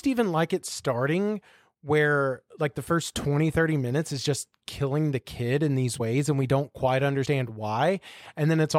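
At 5.99 s and again at 7.25 s the speech lurches forward, as though a sliver of it vanished. These are compressed frames skipped: the decoder never played a short run of coded frames, so about 70 ms of audio is gone each time, which fits roughly three frames of 23.2 ms.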